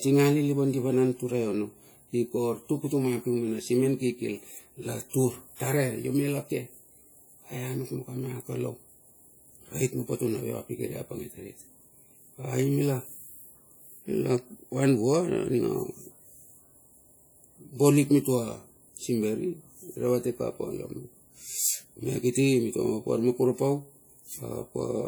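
Speech runs through the whole clip with a ringing, washy smear and a hiss that swells and fades with the voice, plainly audible throughout. It likely comes from WMA compression, whose long transform blocks spread quantisation noise over tens of milliseconds, consistent with a low bitrate near 48 kbps.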